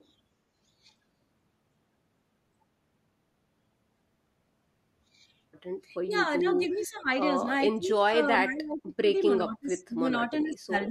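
At 6.05 to 6.12 s and again from 6.41 to 7.09 s the speech dips by about 15 dB, sounding briefly pulled back. From 7.77 to 9.15 s and from 9.45 s to the end it drops much harder, by about 30 dB, with roughly a second of the speech affected in each stretch. This is speech suppressed in double talk, likely because both sides spoke at once and the echo canceller turned the near talker down along with the loudspeaker echo.

Between 6.73 and 6.87 s, inside the second dip, a faint delayed copy of the speech surfaces about 434 ms behind the original and about 15 dB quieter, a short ghostly scrap. This is echo leak, likely from a loudspeaker on one side whose echo canceller let part of its microphone pickup through and sent it back down the line.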